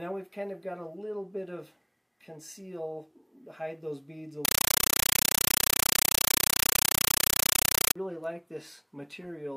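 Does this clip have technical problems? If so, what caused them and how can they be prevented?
Yes. From 4.45 s to 7.96 s the sound is replaced by loud, chattering static. This is a compressed stream played as audio. The pattern points to an AC-3 stream taken as plain samples instead of decoded. Each 8 ms noise burst is one data frame, followed by zero padding, 31.25 times a second. To prevent it, have the receiver decode the bitstream or set the source to output PCM.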